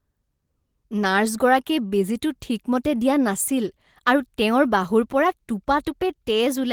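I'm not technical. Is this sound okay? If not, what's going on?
No. At about 1.87 to 1.95 s there's a short stall from a late packet: one piece of the speech arrived late, so the player stretched the last sound for roughly 42 ms to wait. Unlike a dropout, nothing is lost; the sound just briefly hangs, then carries on.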